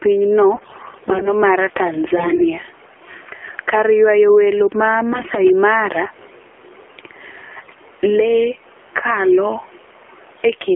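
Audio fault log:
Throughout, gain pumping: the background noise swells by around 10 dB in every pause and ducks under each loud syllable, flattening loud and soft passages together. The likely cause is input gain set far too high with a fast limiter clamping it. Unlike a noise gate, the floor never drops to silence.
Throughout, AMR narrowband mobile codec: the speech is confined to roughly 300 Hz to 3.4 kHz and sounds buzzy and synthetic, with background turning to a swirling warble. This fits the low 7.4 kbps AMR-NB mode. Unlike plain band-limiting, the damage is a vocoder-like artificiality rather than just muffling.
0.56–1.29 s, 2.16–2.45 s, 5.11–5.45 s and 7.62–7.77 s, AMR bit errors: the speech turns hoarse, scratchy and gargly while pitch and level hold roughly steady. This is worst in the first and last bursts, where corruption is heaviest. Flipped low-priority bits misplace the excitation pulses and skew fine parameters. 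Unlike dropouts or concealment, nothing goes silent or repeats.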